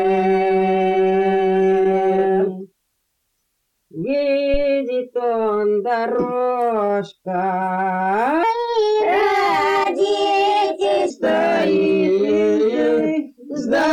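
At 4.54 to 4.66 s a phantom power thump appears: a supply was switched on a live input, and the voltage step passed through the coupling capacitors as a deep low-frequency thud. Its main energy decays within about 28 ms, leaving a brief tail.

From 8.43 to 11.10 s the audio plays as a section at the wrong speed, running 1.26 times faster, so it sounds hurried and raised by roughly four semitones. The likely cause is playback or editing against the wrong clock.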